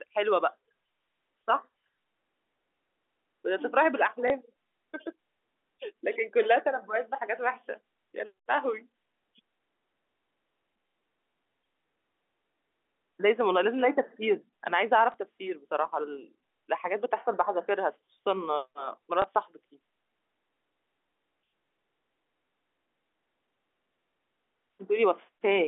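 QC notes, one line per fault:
4.28–4.30 s, 15.12–15.14 s, 19.22–19.24 s, packet loss with last packet repeated: brief small blip lasting 20 ms, where the receiver replayed the previous packet, which fits one lost 20 ms packet.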